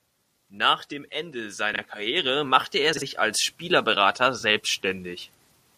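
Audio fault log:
1.73 to 1.78 s, 2.93 to 3.02 s (just after "machte er"), 4.38 to 4.43 s: frames out of order. Two adjacent blocks of 21.3 ms, or 42.7 ms in the middle event, play swapped. The sound flutters briefly. No time is lost.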